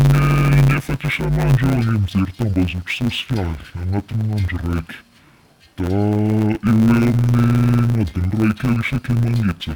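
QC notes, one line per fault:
Throughout: interleaved audio read as planar. Each 10 ms block's alternating left and right samples are split into halves and played at half speed, leaving dull, robotic speech with a 100 Hz buzz but no clear octave drop. The spectrogram shows vertical striations every 10 ms and 100 Hz comb lines.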